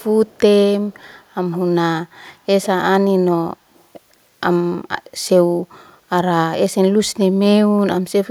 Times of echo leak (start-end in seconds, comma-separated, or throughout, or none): 0.00-0.40, 0.92-1.59, 2.62-2.67, 3.74-3.84